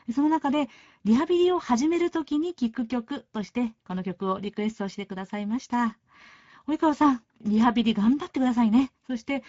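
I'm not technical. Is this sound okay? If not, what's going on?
No. Speex codec damage runs from start to finish, across the whole clip. Speex is an older speech compressor used in internet calls and game chat. It rebuilds the voice from a rough model plus a small budget of detail, and here that budget is tight, so the speech sounds noticeably rough, hoarse and noisy. The crisp top end is missing too: nothing is heard above about 7.7 kHz, and the highest part that remains is a noisy fill rather than real detail.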